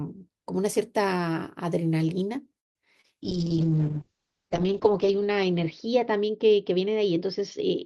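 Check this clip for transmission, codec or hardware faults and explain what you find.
Three separate transmission faults occur within about a second of each other, and the last one persists to the end of the clip.

From 2.59 to 2.77 s there is a call audio freeze. The sound stops moving forward: the last moment is briefly extended, then there is about 150 ms of near-silence before the speech resumes exactly where it left off. Nothing is lost, but a gap of roughly 0.16 s is inserted, and everything after it arrives that much later. This pattern is most likely a delivery stall: packets were held up in transit, the jitter buffer drained, and the receiver padded the wait until the delayed packets arrived.

At 3.01 to 3.06 s there is short concealed packet loss. About 20 ms of audio never reached the decoder in time, and the receiver covered the hole with roughly 26 ms of synthesized continuation extrapolated from the preceding signal before crossfading back to real data. 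The result is a brief smear or slight wobble in the speech rather than a clean dropout, and any very short sound falling in that window may be missing.

From 3.22 s to the end there is a call bitrate drop. The encoder's target falls from 32 kbps to 6 kbps and stays at the lowest level for about 1.4 s. At that rate the codec quantizes much more coarsely and narrows the coded bandwidth from 20 kHz to about 8 kHz. The speech becomes audibly muffled, losing its top-end air and sibilance, and picks up a rough, watery texture for the remainder of the clip.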